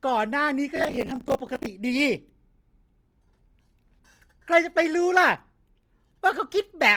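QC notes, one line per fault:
Throughout: Opus compression is the likely cause of a grainy, rough texture across the speech. The encoder appears to stay in its full-band music mode: it preserves each band's overall energy but fills bands it cannot afford to code precisely with folded copies of lower bands or with noise. That keeps the spectrum full, with little hollow swirling and content up to about 20.3 kHz, while tonal detail turns noisy. The plainly audible damage fits a low rate near 24 kbps.
0.76–1.66 s: processor overload crackle, a gritty tearing that lasts almost a second and then stops. The processor is repeatedly missing its deadlines for short audio buffers, each around 10 ms. When a buffer is not ready, the output repeats a stale buffer instead, so each miss splices old audio against new with hard edges. Dozens of these splices in quick succession merge into a continuous crackle on top of the speech until the load eases.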